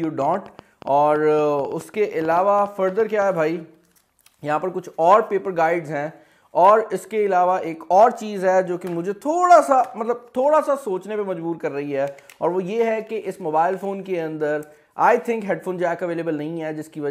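A train of clicks runs from 0.04 to 3.23 s: roughly twenty similar pulses at about 7.2 per second, spaced unevenly and peaking around the level of the sound itself. They are heard as popping over the audio and in its gaps, likely from electrical interference or a faltering interface.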